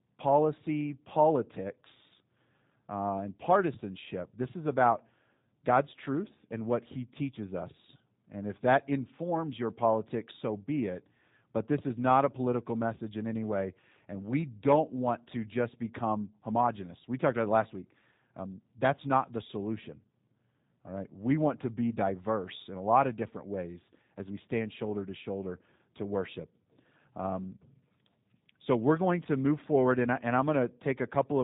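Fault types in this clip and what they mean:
G.729 codec: The speech is coded by modelling each 10 ms frame with a vocal tract filter, pitch predictor and a few pulses. Nothing above 3.8 kHz survives. The rough, synthetic texture is plainly audible. This fits an 8 kbit/s codec.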